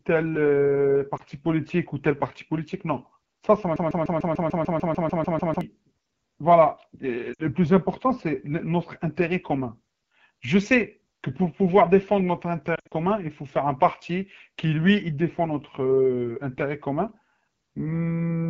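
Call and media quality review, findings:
Rough, raspy speech for the whole clip. The cause is the AMR wideband (HD Voice) codec running at one of its lowest modes, around 8.85 kbit/s. The pulse-driven vocal tract model is starved of bits, and the 6.4 to 7 kHz band is only noise fill.

Brief dip and warble at 1.17 to 1.22 s, matching one lost AMR speech frame of about 20 ms. The decoder repeated the last good pitch and vocal tract settings at reduced gain.

Sound dropping to near silence at 7.33 to 7.42 s, about 60 ms of lost AMR speech frames. The concealment held the previous settings with falling gain, and the sound resumed thin and rough.

Choppy warbling at 12.75 to 12.94 s. Lost AMR speech frames totalling about 120 ms are scattered over 160 ms, with the longest gap about 60 ms. Repeated concealment fades and recoveries make it stutter.

Stuck, stuttering repetition from 3.76 to 5.61 s. 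A 148 ms fragment plays back to back 12 times, and the audio due in that span is gone. This is a broken-record loop, likely from a stalled player or stream resending its last buffered fragment.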